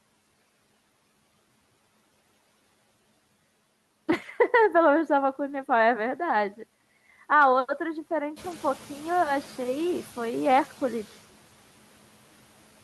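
At 8.36 s you can hear the noise suppressor catching up. The room noise jumps by about 13 dB around 8.5 s and the suppressor's noise estimate trails it, so the noise comes through fairly raw before settling by about 5 dB over roughly 740 ms, wrapping up near 9.1 s.

Right in the middle of that, from 8.51 to 8.53 s, there's a lost packet rebuilt from error correction. It sounds like a single 20 ms frame. The next packet carried a low-bitrate backup copy, so nothing drops out, but that slice sounds rougher and noisier than its neighbours.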